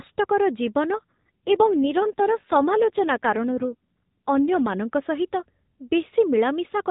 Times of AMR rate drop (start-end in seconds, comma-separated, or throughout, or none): 0.92-4.76